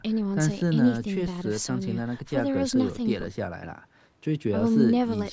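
Nothing stood out on listening to this speech, which carries the normal marks of a call's microphone processing, with the lowest bass trimmed away and nothing above 8 kHz.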